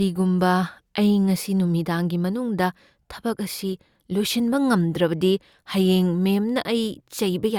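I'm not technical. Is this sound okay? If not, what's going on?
Yes, this sound is okay, and nothing is going wrong with it.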